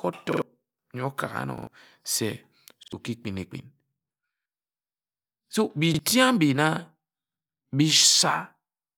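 Repeated buffer stutters at 0.33, 1.58, 2.83 and 4.37 s, where a 46 ms piece of the speech plays three times in a row, and at 5.94 and 7.57 s, where it plays twice. New audio arrived late each time, so the device replayed its last buffer, which fits a 2048-sample buffer. Each repeat joins hard, and the stutter skips ahead by about a tenth of a second, or about half that at the last two.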